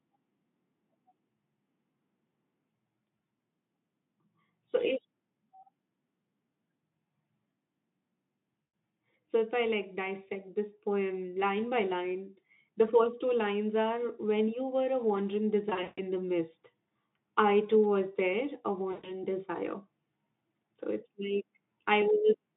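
At 8.61–8.73 s, 15.69–16.00 s and 18.91–19.21 s, VoIP packet loss concealment in the narrowband Speex stream extrapolates the missing speech, roughly 120 ms, 220 ms and 120 ms, into a fading buzzy or noisy fill.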